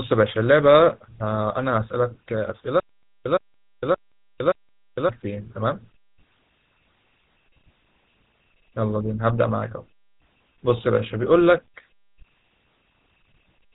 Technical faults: GSM full-rate codec; stutter with silent gaps

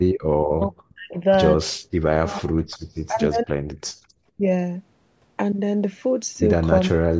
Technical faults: background gated by the echo canceller; speech suppressed in double talk; echo leak

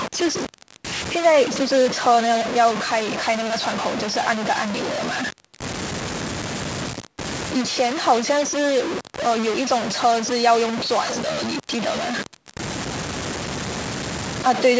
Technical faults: low bit depth without dither

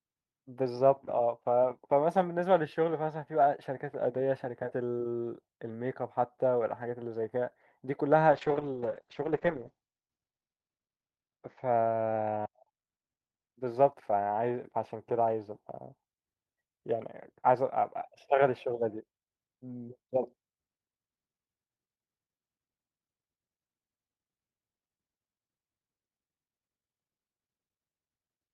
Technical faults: call bitrate drop

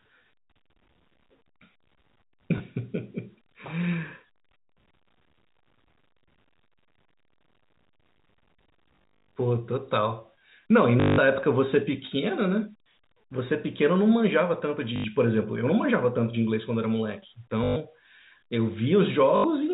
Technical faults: packet loss with last packet repeated

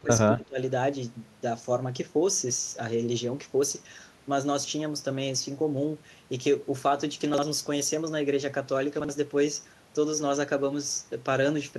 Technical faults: speech suppressed in double talk; chunks out of order

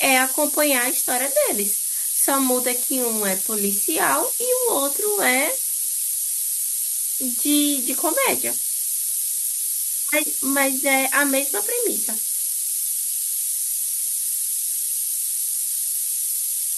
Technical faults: low bit depth with noise shaping

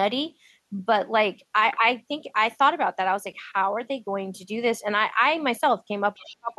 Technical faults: other side's voice leaking through; speech suppressed in double talk

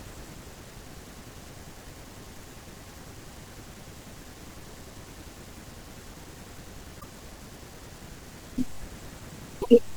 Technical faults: damaged data in a compressed stream

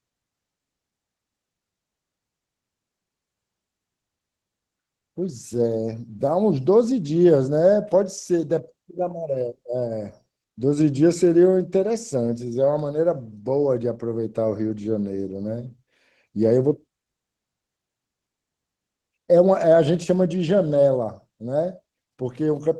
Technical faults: Opus voice compression

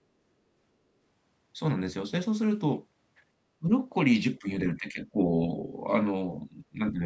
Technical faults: speech suppressed in double talk

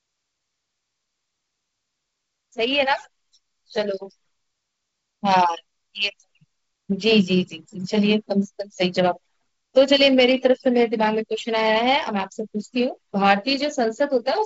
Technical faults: none

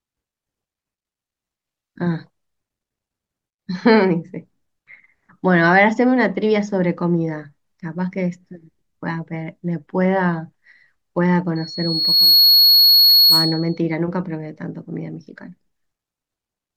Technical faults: loudspeaker feedback squeal

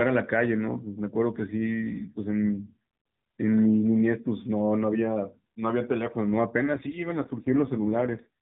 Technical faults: AMR rate drop

